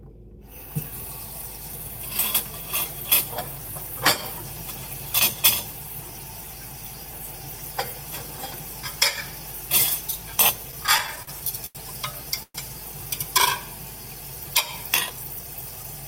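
From 10.71 to 11.77 s the sound stalls repeatedly, a stutter. Packets were arriving late, so the jitter buffer kept running dry. It empties eight times in that second. Each time the receiver stretches the last bit of sound to bridge the wait. The longest bridge lasts 87 ms. Together they fill 194 ms, nearly a fifth of the span. Nothing is lost. The sound just drags and hiccups.

At 12.43 s the audio freezes for 117 ms, a call audio freeze. The last sound carries on briefly, then fades. About 50 ms of that is silence before the sound resumes at 12.56 s. Nothing is skipped. A gap has simply been inserted, and everything after it now runs 117 ms later. The likely cause is packets held up in transit, which emptied the jitter buffer.

From 15.10 to 15.84 s the jitter buffer speeds up. It had built up more delay than it wanted. So the receiver trims many tiny slices, each one or a few pitch periods long. 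Around 70 ms disappears in total. Playback runs at 110% of normal speed. The pitch stays put, but the sound feels hurried and rushed through this stretch.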